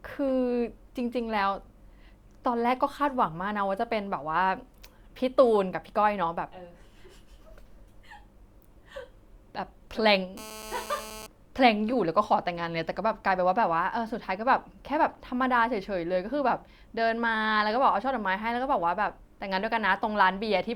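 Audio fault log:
10.37–11.27 s, GSM phone buzz: a hard, raspy buzz at about 217 Hz sits about 15 dB below the speech for just under a second. It is dense with harmonics and has no connection to what is being said. A nearby 2G phone on a call sends short radio bursts 217 times a second. The audio circuitry rectifies those pulses into a repeating click train, so the buzz holds steady across its whole span.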